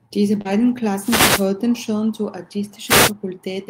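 A short speech recording has three kinds of fault. Between 0.41 and 0.54 s there is short concealed packet loss: about 40 ms never arrived, and the receiver extrapolated roughly 34 ms of it from the preceding sound. The result is a brief smear rather than a silent gap, with about 10 ms of extra timing. Overlapping it, from 0.45 to 0.64 s, a lost packet rebuilt from error correction covers about 100 ms, which fits around six packets. Unlike concealment, this stretch is continuous but rougher and noisier. Two wireless microphone noise hits follow, one from 0.99 to 1.49 s just before "schon zur" and one from 2.86 to 3.12 s just after "schon zur". Each is a swish of static rising over the sound, caused by an FM radio fade. It differs from packet faults because noise is added rather than sound being lost or smeared.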